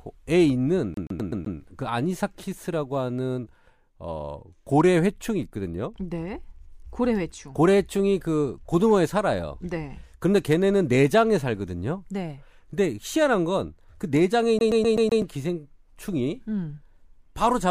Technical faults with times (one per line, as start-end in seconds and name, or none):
0.94-1.57 CD stuck on one turn
14.59-15.22 CD stuck on one turn